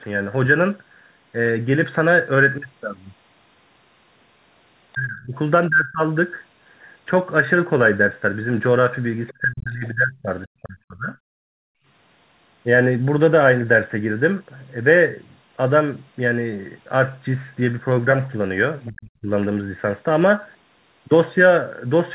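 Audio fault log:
4.94–5.35, 5.69–6.02, 9.32–10.29, 10.45–11.16 and 18.87–19.30 s: speech suppressed in double talk. The speech dips sharply in each window, by roughly 25 dB in the first two, about 30 dB at 9.32–10.29 s, and around 40 dB in the last two. Each dip lasts from roughly a third of a second to about a second. The likely cause is the echo canceller hearing two talkers at once and turning everything down rather than risk passing echo.
9.28–9.32 s: other side's voice leaking through. A brief scrap of a second voice slips in, roughly 25 dB below the main speech, just before the long suppression at 9.32 s. It lasts only a few hundredths of a second. The likely cause is loudspeaker sound reaching the microphone that the echo canceller did not fully remove.
11.44–11.87 s: background gated by the echo canceller. The room sound drops out for under half a second, falling by about 40 dB, then returns. 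This happens while the loudspeaker plays and the canceller clamps the microphone hard. When it releases, the ambience comes back.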